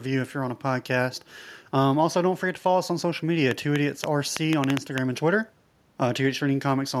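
A train of clicks runs from 3.51 s to 4.99 s: roughly ten sharp, similar pulses at about 5.5 per second, spaced unevenly rather than on a steady beat. They stand well above the speech, around 20 dB louder at their peaks, so they read as distinct popping laid over the talking and through any gaps. The cause is likely electrical interference from nearby equipment or a faulty connection or power supply.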